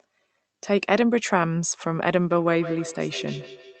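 From 2.31 s to the end, feedback echo between two devices appears. A second device in the room replays this microphone's signal and it is picked up again, which the local echo canceller cannot remove. The speech returns roughly every 150 ms, peaking about 14 dB below the direct speech. The fixed spacing and thinned, ringing copies set it apart from room reverberation.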